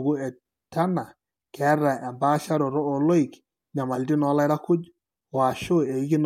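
Nothing stood out as a technical fault on listening to this speech recording.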